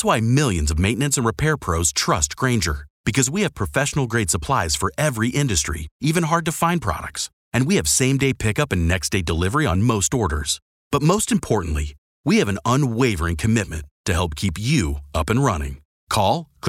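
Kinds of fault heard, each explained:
Clock drift buffer slips: Two devices are likely running on separate clocks, one roughly 100 ppm off the other, so the buffer between them slowly creeps until a small block of samples is dropped or repeated. In this speech the slips come as regular clicks every 1.86 s, around seven in all, beginning after "maintenance and repair pros" and stopping just before "up and".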